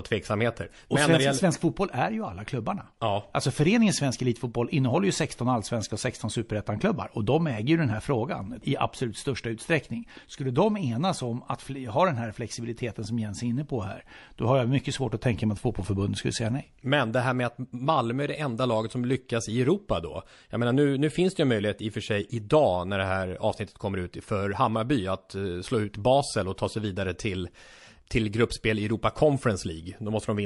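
From start to end the speech sounds watery and swirly, with metallic chirps on s sounds. That is likely MP3 compression at a low bitrate, around 48 kbps: weak frequency lines switch on and off from frame to frame, which sets it apart from plain low-pass filtering. From 26.56 to 26.58 s, just before "ta sig vidare till", a hiss about 10 dB up leads into the attack. That is pre-echo, and it differs from a click because it is noise smeared ahead of the onset. The encoder held a long 48 ms block instead of switching to short blocks, so quantisation noise spread across the quiet gap.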